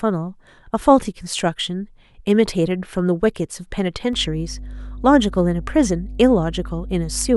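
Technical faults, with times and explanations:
4.13 to 7.36 s, mains hum: partway through the speech a steady low drone at 50 Hz comes in and sits there right to the end. It's pretty prominent, roughly 10 dB below the speech, so you can't miss it under the quieter parts. That's the power line leaking into the signal path, most plausibly through a ground loop or a transformer close to the cabling, which is why it's a constant tone rather than noise.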